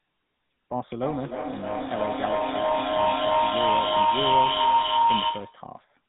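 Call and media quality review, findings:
Buzzy, gravelly speech throughout, nothing above 4 kHz. GSM full-rate codec: vocal-tract model driven by sparse regular pulses, two in three excitation samples dropped, band capped at 4 kHz; damage plainly audible, consistent with 13 kbps GSM full rate.

Rising tonal howl near 1 kHz, 1.04 to 5.76 s, peaking about 10 dB over speech, pulsing roughly every third of a second. Feedback howl: two same-room endpoints on one call, mic-to-speaker loop gaining per pass until broken.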